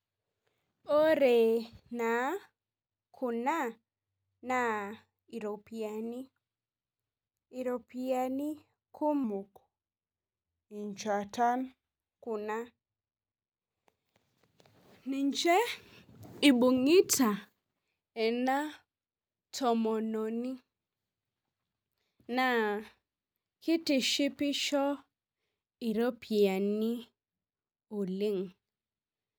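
A speech clip with a section at the wrong speed from 9.24 to 12.25 s. It plays at 0.878 times normal speed, about two semitones low, so pitch and pace drop together. A pitch shift would leave tempo intact. The likely cause is an edit running on a mismatched clock.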